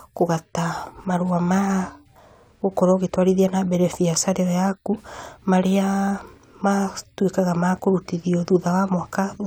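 No technical faults can be heard anywhere in this recording.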